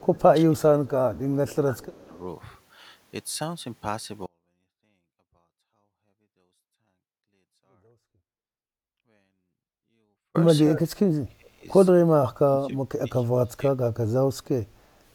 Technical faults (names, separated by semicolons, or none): speech suppressed in double talk; echo leak; audio dropout to a faint residue